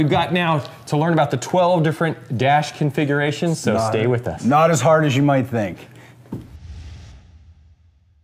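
Nothing in the audio stood out as a technical problem on listening.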